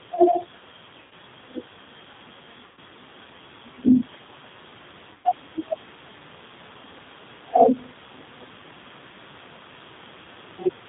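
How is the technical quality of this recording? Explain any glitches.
The recording has plainly audible low-bitrate codec damage throughout, plus three short dropouts.

The whole clip carries G.729 codec coloring, consistent with the 8 kbit/s G.729A variant. The codec doesn't store the waveform. It rebuilds speech from a vocal tract filter, a pitch predictor and a few pulses per 10 ms frame. Everything above 4 kHz is gone, so the speech sounds muffled. It also has a rough, slightly synthetic edge.

There are VoIP packet loss gaps at 1.02 to 1.14 s, 2.66 to 2.79 s and 5.14 to 5.29 s. Each gap fits roughly 90 to 110 ms of missing audio. The decoder filled each hole by extending its last pitch and filter settings, lowering the level frame by frame. The result is a brief buzzy, smeared tone that fades. The speech stays weak or distorted for a moment after each gap.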